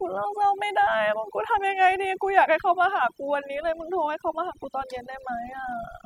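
From start to finish, the clip carries overdone noise removal: a noise reduction stage was pushed far too hard on a noisy recording, so every frequency band that dips toward its noise estimate gets pulled down or muted outright. Quieter parts of the speech are caught along with the noise. Between phrases the background drops away, dotted with twinkling specks.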